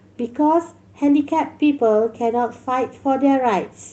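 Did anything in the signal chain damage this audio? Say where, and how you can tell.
Yes. From 1.25 to 1.35 s the speech turns briefly rougher and noisier without any gap. That is a lost packet rebuilt from error correction: about 60 ms of lost network packets were played from the low-bitrate Opus copies carried in the following packets, on a call path limited to about 8 kHz.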